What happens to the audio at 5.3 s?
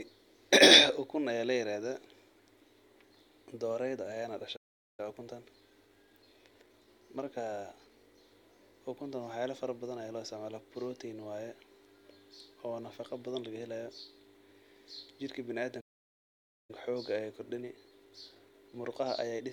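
At 5.3 s you're inside a time-compressed catch-up running from about 5.0 to 8.0 s. After a stall, the player trims its backlog by snipping out tiny slices and cross-fading the joins, so the speech runs about 1.1x fast at normal pitch.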